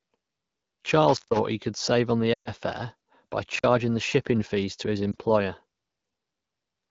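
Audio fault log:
1.09–1.39 s and 3.56–3.65 s, intermittent contact: a loose connection opens for about 140 ms just before "he could save on", then about 47 ms between "fare by" and "the shipping fees to", cutting the sound abruptly with crackle at each edge and faint hiss in the gap.
2.33–2.51 s and 5.12–5.15 s, lost AMR speech frames: between "could save on the" and "fare by", a 120 ms stretch (fitting six 20 ms frames) is rebuilt from the last good parameters with falling gain, so the sound drops to near silence within two frames in this wideband stream. The later single-frame loss gives a short dip.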